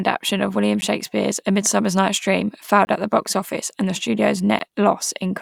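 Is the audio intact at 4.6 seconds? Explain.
No. At 4.59 s there is a tick or dip, a block of digital silence: 10 ms of the audio cuts out abruptly and back with no fade.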